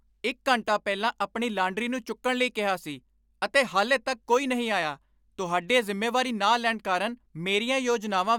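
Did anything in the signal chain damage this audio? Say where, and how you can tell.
No, nothing along the chain seems to have damaged this speech recording; I can't hear any stage leaving its mark on it anywhere.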